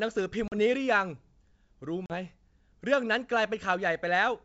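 Packet loss on an ADPCM call at 0.48 to 0.59 s and 2.06 to 2.15 s: about two packets, 40 ms each time, drop to silence, and the desynchronised decoder resumes slightly distorted before settling.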